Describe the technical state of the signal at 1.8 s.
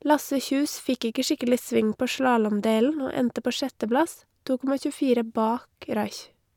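At 1.8 s the speech signal is intact, with no audible dropout, distortion, glitch or other technical fault at that moment.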